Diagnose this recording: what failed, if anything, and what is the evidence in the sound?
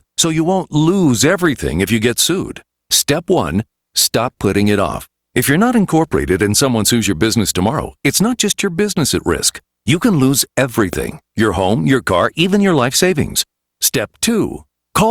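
A loud pop at 10.93–10.95 s, between "can lose" and "your home your car", is likely an analogue electrical pulse about 10 dB above the speech, which continues underneath rather than dropping out.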